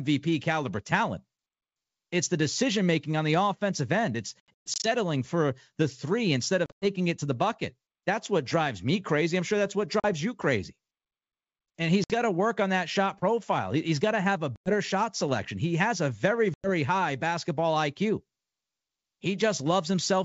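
Packet loss on an ADPCM call cuts silent gaps into the speech at 4.40–4.88, 6.66–6.85, 10.00–10.06, 12.04–12.15, 14.56–14.74 and 16.54–16.70 s. The worst is the first, with about 260 ms missing in scattered runs of up to 120 ms. On a waveform these are flat, hard-edged holes. A spectrogram shows blank vertical slots. After each gap the decoder's predictor and step size no longer match the sender's, so the speech comes back with a click, a wrong level or brief distortion before it settles within tens of milliseconds.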